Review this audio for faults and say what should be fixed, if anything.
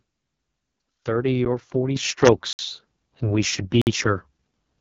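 AMR wideband (HD Voice) codec runs throughout at heavy damage: speech sounds rough and raspy, with nothing above 7.5 kHz. That points to the lowest 6.6 kbit/s mode. Unlike plain low-pass filtering, the rasp comes from a starved pulse model, not just missing treble. Prevention: negotiate 12.65 kbit/s or higher.

Block of digital silence occurs three times: a tick at 1.45 s (about 9 ms), and short holes at 2.53 to 2.59 s (60 ms) and 3.82 to 3.87 s (54 ms). Each is an abrupt cut out and back with no fade. That sets it apart from packet-loss concealment, which fills gaps with smeared sound, and it points to the output buffer not being filled in time. Prevention: enlarge the audio buffer or raise the audio thread's priority.

Microphone volume stepped up at 1.96 s, by about 8 dB in about 10 ms. Voice and background jump together and stay louder. A compressor or AGC in the signal path would ride the level smoothly rather than in one step, so this one-step change comes from the device input volume. 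Prevention: disable automatic microphone level adjustment in the call software.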